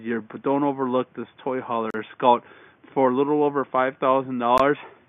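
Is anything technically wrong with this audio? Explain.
Yes. There are two gaps at joins of encoded pieces, from 1.90 to 1.94 s (about 36 ms) and at 4.58 s (about 18 ms). The separately encoded pieces kept their start delay and end padding, so silence with smeared edges opens in continuous sound. Unlike a dropout, the sound resumes exactly where it stopped, with nothing skipped.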